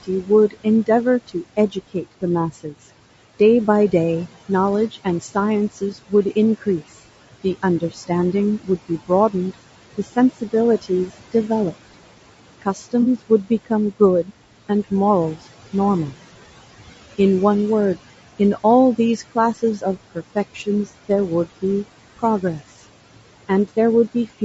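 Throughout, the background warbles and pumps, sinking by about 18 dB between phrases and rising under them. These are noise suppressor artifacts from band-by-band attenuation of the room noise, which sits about 17 dB below the speech.

The speech itself sounds rough and grainy, with noise between the harmonics. This is likely low-delay AAC compression at a low bitrate, around 32 kbps, whose short frames resolve pitch poorly. Nothing is heard above 8 kHz, consistent with the call chain's bandwidth.

Speech cut by the noise suppressor makes soft consonants and word endings sound swallowed. Drops of up to about 16 dB, totalling about 100 to 400 milliseconds per stretch, occur at 0.03–2.74 s, 4.49–6.82 s, 7.44–8.10 s, 8.63–11.74 s, 12.62–16.13 s and 18.39–21.63 s. In each stretch, quiet speech was mistaken for noise.

At 13.01–13.06 s and 22.73–22.76 s, brief smeared, noisy patches interrupt the sound. 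This is AAC frame loss with concealment, where the decoder rebuilds missing audio from the last good spectrum. The first patch suggests two lost frames and the second one.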